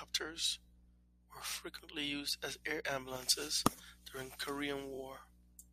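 At 4.94 to 4.98 s the speech stutters from repeated frames. A single compressed block of 23.2 ms was played twice more than it should have been. The decoder repeats that sliver of sound, and the clip grows by 46.4 ms.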